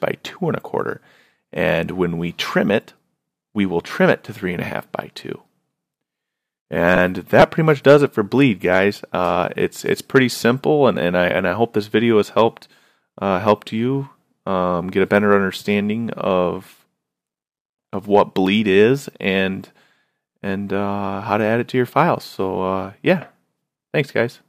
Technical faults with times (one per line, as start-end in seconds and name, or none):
6.96 lost LE Audio frames
7.40 repeated buffer
10.63 repeated buffer
13.69 repeated buffer